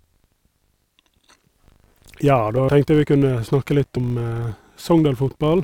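A filter restarted on every block runs throughout this speech recording, producing a 50 Hz buzz under the talker. Some processing filter is dropping its internal state at each block boundary and starting again from silence, so every block opens with a tiny transient. These arrive fifty times a second, which points to blocks about 20 ms long, and they fuse into a buzz that grows and shrinks with the loudness of the speech. Compressed frames skipped appear twice, at 2.69 to 2.94 s and at 3.97 to 4.05 s. At each point the speech jumps forward by roughly a tenth of a second because whole frames of the compressed stream were never played, either missing or rejected by the decoder as damaged.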